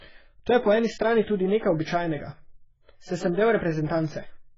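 Throughout, the speech sounds dull and smeared, with a warbling, fizzy texture on sibilants and sustained sounds, and nothing above 7.5 kHz. This is likely heavy AAC compression, with a damage level that fits a very low bitrate of around 12 kbps.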